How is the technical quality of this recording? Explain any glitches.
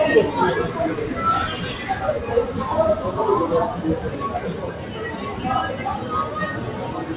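The recording has one glitch, and the whole clip is band-limited, with nothing above 4 kHz and the usual coding noise of a telephone-grade call path, which fits G.711 A-law at 64 kbps.

Sound cut by the noise suppressor, 4.54 to 4.94 s: the suppressor mistook part of the sound for background noise and pulled it down, by about 4 dB at its deepest, over roughly a third of a second. The sound briefly sinks.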